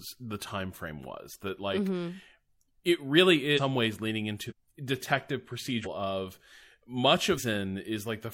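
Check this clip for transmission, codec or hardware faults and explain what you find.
The clip has one fault, compressed frames skipped, occurring four times. At 3.53 to 3.60 s, between "it really" and "ways leaning", the speech lurches forward, losing about half a second. The same happens just after "ways leaning" at 4.46 to 4.53 s and at 5.81 to 5.87 s, each losing about 0.7 s, and at 7.34 to 7.40 s, losing about half a second. Whole compressed frames were never decoded, either missing or rejected as damaged, so playback jumps by roughly ten to fifteen frames, which fits a frame of about 46 ms.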